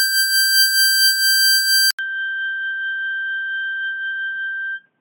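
At 1.91 s the music drops out for about 80 ms, then returns through what is likely an input switched to a poorer device, lasting to the end. Nothing above 3.8 kHz survives, so the sound turns dull and boxy, comes back roughly 10 dB quieter, and carries a faint new background noise. A plain low-pass filter or codec change would not bring the gap, the level drop and a different noise floor all at once.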